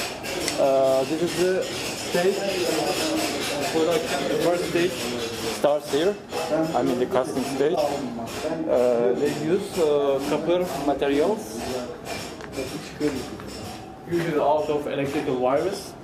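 At 7.75 to 7.78 s the sound jumps forward and a brief chirp, burst of noise or short hole replaces it, lasting about one 26 ms MP3 frame. The likely cause is a broken MP3 bit reservoir: frames were lost, and the next frame reached back for its borrowed data but decoded bytes from the wrong frame. On the waveform this shows as an abrupt discontinuity.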